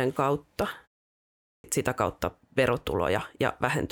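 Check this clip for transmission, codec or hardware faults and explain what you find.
One hardware fault is present: a clipped start after a pause at 1.41 s. Following a 0.62 s silence, the output device is still waking, so about 230 ms is swallowed and "sitä kautta" begins abruptly.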